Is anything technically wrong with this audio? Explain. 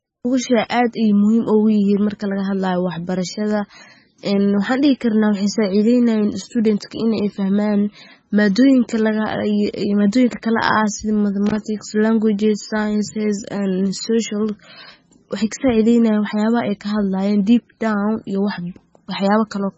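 Yes, there are two faults. Throughout, the speech has no content above 8 kHz and a watery, swirling texture, with metallic chirps on sibilants and smeared consonant onsets. This is likely heavy MP3 compression at a very low bitrate, around 18 kbps. The encoder cuts the treble at a fixed point and switches weak frequency lines on and off between frames.

From 11.46 to 11.66 s, just before "languages sciences and social", there is an irregular burst of crackle and scratching. This is loose connector crackle. A worn or dirty contact rapidly makes and breaks, chopping the signal.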